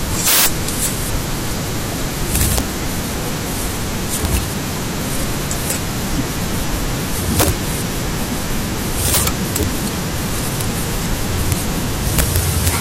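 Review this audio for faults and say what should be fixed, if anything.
Violent, sharp cracks burst out on the louder syllables throughout the speech, much harsher than clipping. This is integer overflow: the signal is driven about 35 dB too hot, and the small fraction of samples past the integer limit wrap to the opposite sign, flipping across the full range. To prevent it, use saturating arithmetic or a limiter ahead of the integer stage so that peaks clamp instead of wrapping.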